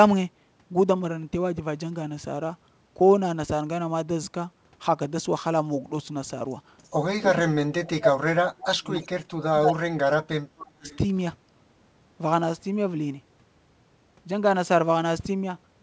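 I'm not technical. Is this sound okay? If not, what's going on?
No. Two related problems show up in the middle of the clip, both typical of a call where one side uses a loudspeaker.

Echo leak: At 6.84 to 6.90 s, 9.02 to 9.07 s and 10.88 to 10.98 s there are brief, faint scraps of a repeated voice, arriving about a third of a second late. The likely cause is that the far end's echo canceller missed part of what its microphone picked up from its own loudspeaker, so that sound was sent back down the line.

Speech suppressed in double talk: From 7.31 to 8.98 s, 9.41 to 10.25 s and 10.50 to 10.87 s, the main voice drops sharply and at its worst almost disappears. About one and a half seconds are affected in the first stretch, and less in the later two. This likely happened because both sides were talking at once, and the echo canceller, unable to tell the talker from the loudspeaker echo, turned everything down together.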